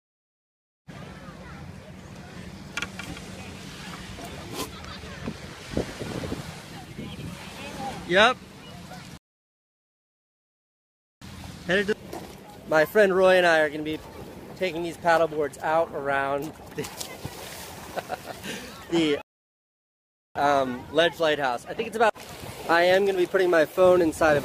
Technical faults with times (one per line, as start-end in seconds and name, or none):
9.17-11.22 rebuffering stall
19.22-20.36 rebuffering stall